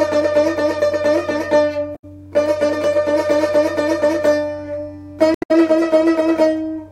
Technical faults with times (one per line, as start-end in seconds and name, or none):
1.92-2.04 damaged data in a compressed stream
5.32-5.51 damaged data in a compressed stream